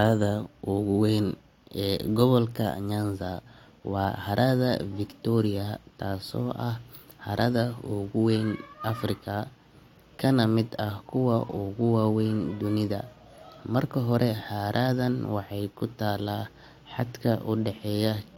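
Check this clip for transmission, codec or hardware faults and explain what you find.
Nothing in this speech stands out as a transmission, codec or hardware problem, so there's no fault to report here.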